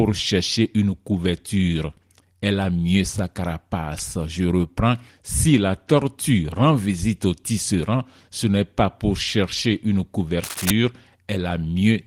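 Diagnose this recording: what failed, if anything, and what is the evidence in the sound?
The failure sits in the analogue wiring. From 10.44 to 10.70 s, right after "pas pour chercher une", a rough scratching burst rides over the speech at about 5 dB below its level. This is cable scratch noise, likely from a worn connector or cable being moved so its contact resistance jumped about rapidly. On a spectrogram it shows as clustered, uneven broadband vertical streaks. The waveform shows dense, spiky, irregular bursts, with the light Opus coding layered over the whole recording.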